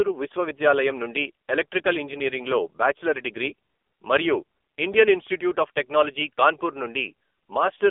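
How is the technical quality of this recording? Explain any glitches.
Quality is poor. The whole recording has passed through an AMR narrowband mobile codec, the AMR-NB speech coder used on 2G and 3G phone calls. The damage lasts from start to finish. Nothing above 3.6 kHz survives, and the band sits at roughly 300 Hz to 3.5 kHz, as on a phone line. AMR-NB does not store the waveform. It models the vocal tract and drives it with a few pulses for each short slice of a frame. The coding damage is heavy, which fits a low mode of about 6.7 kbps. The speech sounds muffled, buzzy and synthetic.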